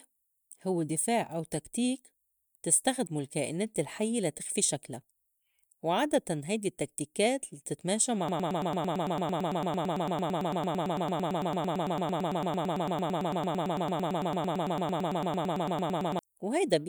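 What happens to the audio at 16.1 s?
At 16.1 s the audio is still caught in a broken-record loop that began at 8.29 s and ends at 16.19 s. A fragment of about 0.11 s repeats exactly, back to back, 71 times, giving a rapid stutter in place of the speech. The likely cause is a player, encoder or stream stalling and re-sending the last buffered piece, so whatever should have been heard across those eight seconds is lost.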